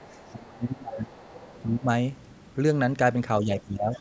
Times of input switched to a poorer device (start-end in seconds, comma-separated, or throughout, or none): none